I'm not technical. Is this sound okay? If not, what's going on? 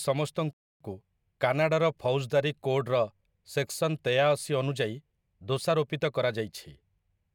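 No. At 0.53 seconds the player ran out of downloaded audio and had to wait for more, a rebuffering stall. The speech drops to silence until 0.81 seconds, then picks up exactly where it stopped, so nothing is missing but about a quarter-second pause is added.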